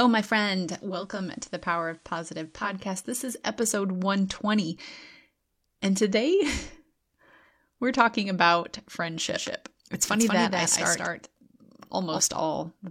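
A speech recording in which, from 0.81 to 2.90 s, digital radio blending to analogue takes over: a 494 ms cross-fade drops into FM, bringing hiss roughly 35 dB under the signal and a level dip of about 2 dB, which sets it apart from a codec dropout. From 9.30 to 12.20 s a doubled audio track appears, a dry, full-band copy trailing by roughly 200 ms at about 5 dB down, cutting in and out abruptly. The lack of decay or room colour rules out reverb, and the likely cause is a second, slower capture path mixed in.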